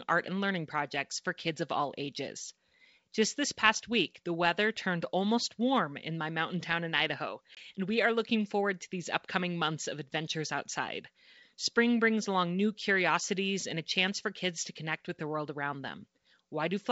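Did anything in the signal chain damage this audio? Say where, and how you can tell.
Yes: packet loss on an ADPCM call at the network stage, a hard-edged 20 ms hole at 7.55 to 7.58 s before "and we are looking". The waveform shows a flat gap from a couple of lost packets and a spectrogram shows a blank vertical stripe, then the mistracking decoder brings the speech back slightly distorted.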